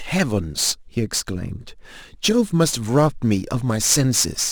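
Crude rate conversion runs through the whole clip, with samples repeated rather than filtered, which fits a 44.1 to 48 kHz jump, leaving a gritty inharmonic fizz roughly 20 dB under the speech.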